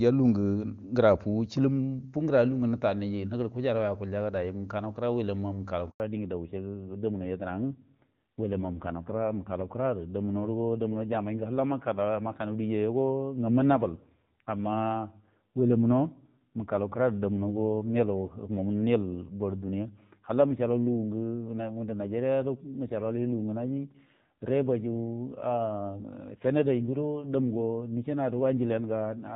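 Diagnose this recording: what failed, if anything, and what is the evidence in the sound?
Network stage: a handover gap from 5.90 s to 6.00 s. The speech drops out abruptly for 100 ms. No frames arrive while the call switches from one network to another, so whatever was spoken in that window is lost outright.

Codec stage: a fallback to narrowband from 6.0 s to the end. Before the switch, the HD Voice wideband path sounds clean and full. Afterwards, nothing remains above 4 kHz and the speech turns duller and rougher, which fits a drop to AMR-NB at around 7.4 kbit/s.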